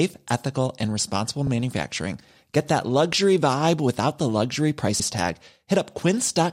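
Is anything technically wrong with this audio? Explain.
Yes, there are repeated frames. After "ethical and responsible", 1.47 to 1.49 s replays once, a 26.1 ms block that fits a single compressed frame. After "vibe without the luxury", 4.99 to 5.07 s replays a 78.4 ms block. Each is an identical replay that lengthens the audio, heard as a brief stutter. That sets it apart from a dropout, where sound goes missing, and from an echo, which repeats fainter and decays.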